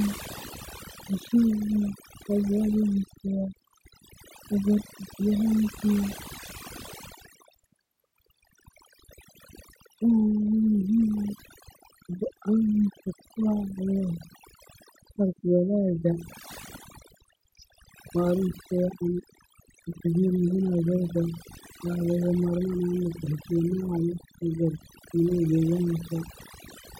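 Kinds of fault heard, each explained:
Overdone noise removal: a noise reduction process applied far too aggressively to a noisy speech recording, running for the whole clip. Any frequency band close to the estimated noise floor is pulled down hard or muted outright, so the softer components of the speech are stripped away along with the noise. Between phrases the background collapses to near silence scattered with brief tonal specks.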